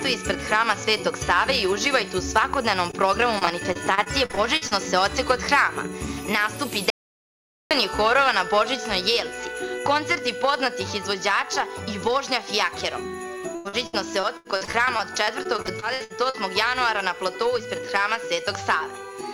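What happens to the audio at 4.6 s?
Repeated packet loss from 3.39 to 4.73 s: about ten short gaps are each patched by extending the previous sound, so the audio turns choppy and robotic.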